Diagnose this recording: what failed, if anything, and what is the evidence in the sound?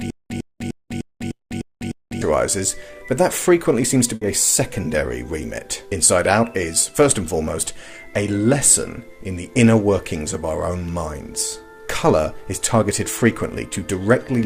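Right from the top, the audio is already caught in a stutter with silent gaps, running until about 2.2 s. A short burst of roughly 0.10 s keeps coming back, followed by about 0.20 s of dead digital silence, so it repeats every 0.30 s or so, seven times over. The likely cause is a playback or streaming stall at the driver/buffer stage, with each retry replaying the last fragment before running dry. Whatever should have played there is lost.

There's also a burst of packet loss on the network side, at 1.33 to 1.42 s and again at 4.15 to 4.24 s. In each one, the receiver holds the last sound for about 60 ms as a fading concealment tail. Then the audio jumps ahead, and about 60 ms of material is missing. That's the classic signature of a run of late or dropped packets being papered over by concealment.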